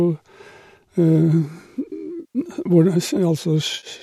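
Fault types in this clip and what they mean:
AAC frame loss with concealment: runs of audio frames never reached the decoder, which filled the gaps from earlier spectrum, leaving smeared, noisy patches near 2.2 s and 3.7 s.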